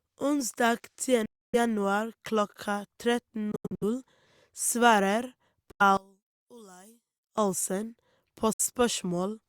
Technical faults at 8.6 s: Bluetooth dropout

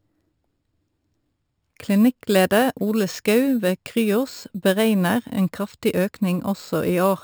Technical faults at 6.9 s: imaging from sample-and-hold upsampling

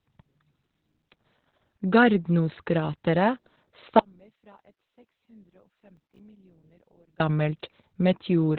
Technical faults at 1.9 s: Opus voice compression

